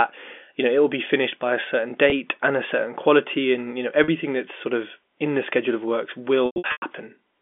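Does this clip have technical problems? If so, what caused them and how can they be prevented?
Yes. Packet loss with pitch repetition occurs at 2.10–2.12 s after "finished by a certain", 4.04–4.08 s after "quality and you know", and 6.46–6.82 s after "the schedule of works". The receiver bridged each gap by repeating the last pitch period. The first two sound briefly held and buzzy. The last loses 280 ms across 360 ms, with runs up to 100 ms, and fades toward silence. Forward error correction, a deeper jitter buffer or a steadier network link would prevent it.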